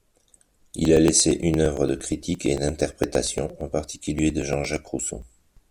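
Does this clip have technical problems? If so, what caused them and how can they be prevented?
Yes. Periodic USB or driver dropouts run from 0.16 s to 5.57 s, repeating every 0.115 s: each time the audio path stalls and roughly 10 ms of speech is skipped, leaving a regular string of about fifty ticks. Preventing it means finding and disabling the background task or power-saving setting that blocks the USB bus, or moving the interface to its own port.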